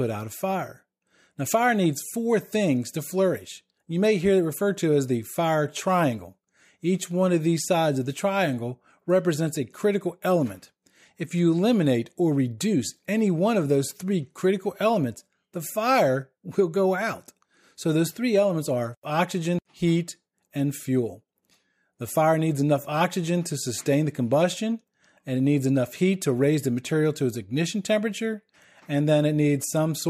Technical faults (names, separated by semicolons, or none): none